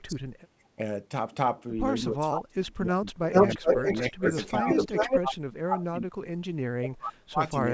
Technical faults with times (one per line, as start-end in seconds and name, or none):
0.00-0.79 speech suppressed in double talk
2.02-3.08 speech suppressed in double talk
3.31-5.20 echo leak
3.43-7.74 speech suppressed in double talk